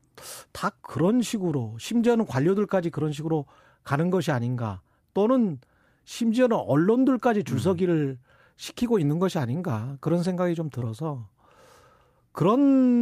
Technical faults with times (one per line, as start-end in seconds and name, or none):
10.79-10.83 short concealed packet loss